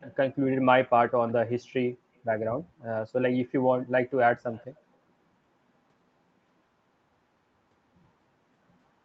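A far-end echo canceller likely let part of its loudspeaker pickup through, producing echo leak at 0.00–0.16, 1.28–1.32, 2.80–2.84 and 4.53–4.82 s: faint scraps of the speech return 179 ms late, roughly 25 to 35 dB below the direct sound, over the call's 8 kHz-limited Opus audio.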